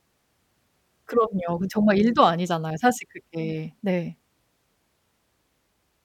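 A speech recording with no audible technical faults.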